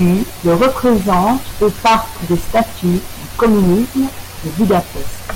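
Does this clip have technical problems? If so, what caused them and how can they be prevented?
Yes. The speech is hard clipped from start to finish. The input was driven about 16 dB beyond what the recording stage could pass, so roughly a tenth of all samples hit the ceiling and were sliced flat. Those squared-off peaks add harmonics high in the spectrum, giving a harsh, buzzy fuzz on every loud syllable. Soft saturation would sound rounder and warmer instead. Setting input gain with ample headroom, or using a limiter before conversion, prevents it.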